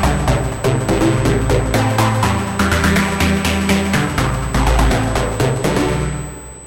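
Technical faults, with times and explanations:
Throughout: USB whine, a steady fixed-pitch tone at 8 kHz sitting roughly 20 dB under the sound. That's the bus's 125-microsecond microframe rhythm getting into the power or ground line, so the current draw turns into an audible high whistle.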